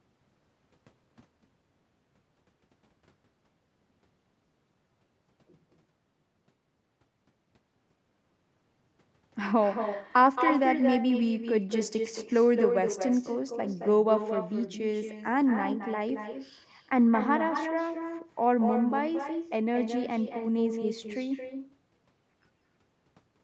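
From start to finish, every phrase is trailed by a quieter, thinner copy arriving about a fifth of a second later and only about 7 dB down. This is echo with no canceller: the far end's loudspeaker feeds back into its microphone and nothing subtracts it.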